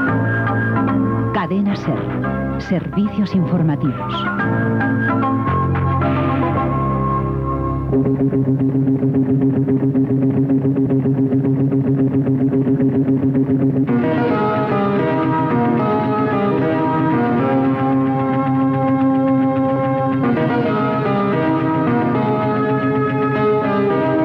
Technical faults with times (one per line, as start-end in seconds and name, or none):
19.76 compressed frames skipped